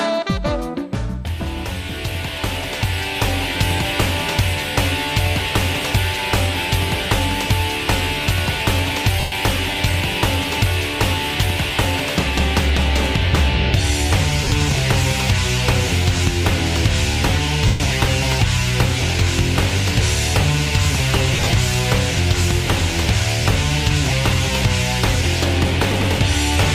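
Lost LE Audio frames at 9.2–9.32 s, 14.44–14.52 s, 17.66–17.8 s and 21.33–21.53 s: the decoder fills each 70–140 ms gap by repeating the last spectrum with random signs, smearing the sound into brief noisy patches, scattered as short dropouts at 14.44 s and 21.33 s.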